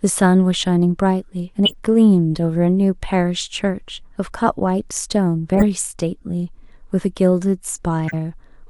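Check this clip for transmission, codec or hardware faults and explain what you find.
Three short codec faults appear in the speech, each a corrupt frame decoded. At 1.65–1.74 s, 5.55–5.64 s and 8.08–8.14 s, flipped bits in a few compressed frames were decoded anyway, so misread gains pushed energy into wrong frequencies. Each is heard as a brief chirp or noise burst, the first strongest and later ones quieter.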